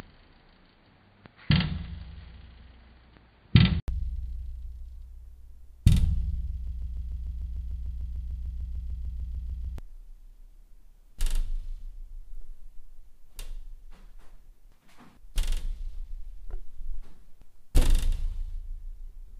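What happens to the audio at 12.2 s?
Nothing goes wrong at 12.2 s: the audio runs on intact through that moment, with no dropout, click or other fault.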